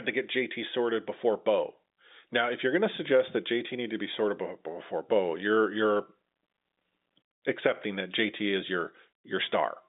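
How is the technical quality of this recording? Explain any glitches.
No faults turn up anywhere in the recording. The speech comes over G.711 telephone coding, so it is confined to the line band of 200 Hz to 3.7 kHz.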